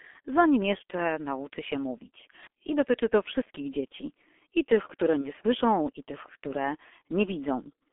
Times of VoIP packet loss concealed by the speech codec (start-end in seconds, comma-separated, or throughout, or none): 5.21-5.31